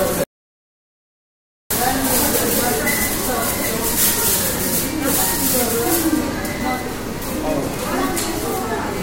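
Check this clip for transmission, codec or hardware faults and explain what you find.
One fault is present: an audio dropout to silence. From 0.24 s to 1.71 s the sound cuts off abruptly and leaves about 1.47 s of silence, likely because the input signal was lost while recording carried on writing silence. Unlike a quiet passage or noise gating, no room tone or fade remains, and the audio resumes mid-flow.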